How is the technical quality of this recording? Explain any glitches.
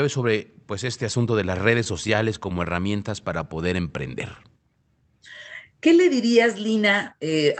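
The recording has two brief timing glitches in the speech, heard through a call codec whose audio stops around 8 kHz.

From 3.34 to 4.08 s, speech drags at about 94% speed with unchanged pitch. This is a jitter buffer slow-down: the receiver repeated pitch periods, adding 54 ms to rebuild its reserve.

From 6.17 to 6.84 s, speech sounds hurried, running at about 107% speed with the same pitch. This is a jitter buffer speed-up: the receiver trimmed around 50 ms of pitch periods to reduce excess delay.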